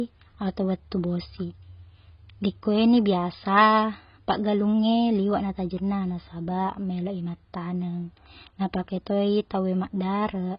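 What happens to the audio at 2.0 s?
At 2.0 s the speech sounds dull and smeared, with a watery, warbling texture and nothing above about 5.1 kHz, as it does throughout. This is likely heavy AAC compression, consistent with AAC-LC at roughly 16 kbps, quantising away detail and lowering the cut-off.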